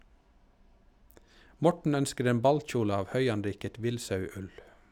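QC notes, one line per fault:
Nothing stood out on listening to this speech clip.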